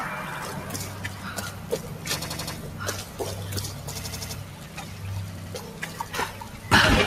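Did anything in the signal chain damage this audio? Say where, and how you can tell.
Yes, in two places. At the driver or buffer stage there is a repeated buffer at 0.34 to 0.43 s, 2.22 to 2.56 s, 4.01 to 4.35 s and 5.38 to 5.55 s. An 85 ms slice plays again once, four times, four times and twice respectively, so each is a stutter. The 85 ms block length fits a 4096-sample buffer. On a waveform you see identical blocks placed end to end. A spectrogram shows the same pattern copied, with a vertical line at each hard join. The sound that should have followed is lost, roughly a tenth to a third of a second per event.

In call processing, a noise suppressor made for speech was applied to this sound and stays on throughout. It treats sustained, steady parts as noise and pulls them down, while onsets pass. The level swings by about 5 dB as a result, which you hear as pumping or thinning on held material and decaying tails. 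On a spectrogram, sustained bands fade soon after each onset. The waveform envelope dips after attacks instead of decaying smoothly.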